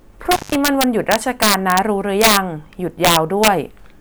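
Right from the start and running through the whole clip there's integer overflow. The speech is pushed about 4 dB past the top of the integer range, and instead of being held at the limit, those peaks wrap round to the opposite sign. Only a small fraction of samples, under one percent, go over, but each one jumps across the full range, so the loudest syllables come with sharp, violent cracks that are far harsher than ordinary clipping would be.

Then, from 0.32 to 0.55 s, there's an intermittent contact, the kind of thing a loose plug or cable gives you. The connection opens for about 167 ms, so the speech drops out or breaks up in that stretch, with crackle at either edge where the contact breaks and remakes. While the line is open you're left with just faint hiss before the signal snaps back in.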